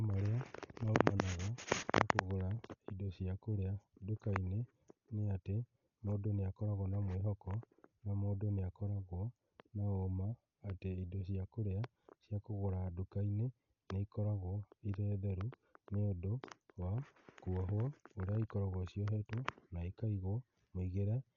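Throughout, the speech sounds dull and heavily muffled, with nothing above 7 kHz, and a rough, fluttering noise clings to voiced tones. This is likely Dolby Digital compression at a starved bitrate around 40 kbps, where many frequency lines get no bits and are filled with noise.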